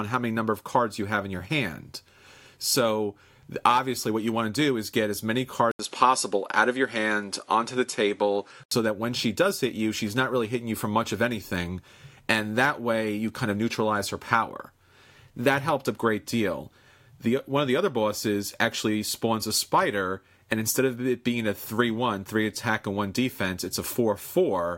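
Input switched to a poorer device, from 5.71 to 8.71 s: an 80 ms gap opens at the switch, then nothing above 11.4 kHz remains and a different background noise appears, roughly 40 dB below the speech, with the level roughly unchanged. The recording input likely changed mid-take to a narrower-band microphone.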